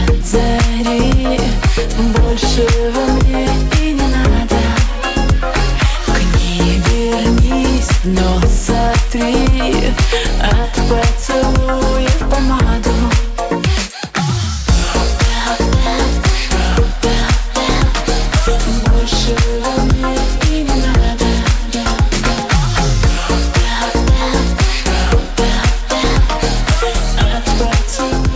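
No technical faults can be heard anywhere in the audio, and the signal holds steady without interruption.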